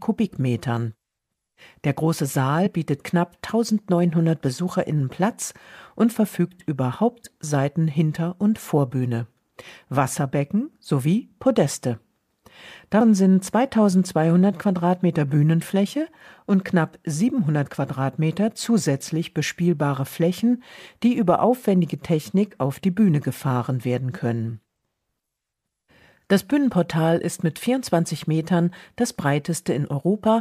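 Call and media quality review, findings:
Compressed frames skipped, 2.65 s: audio jumps forward by about one 26.1 ms frame, roughly 30 ms lost. Probable component: decoder input or container, frame missing or rejected as corrupt. Jump length matches a single frame, pointing to whole-frame loss rather than a sample-level glitch.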